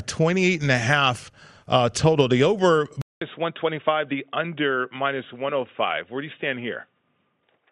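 At 3.02 s, after "total the over", a 200 ms gap precedes duller, slightly quieter speech with a faint new hiss. The spectrogram goes empty above 3.8 kHz, likely an input switched to a poorer device.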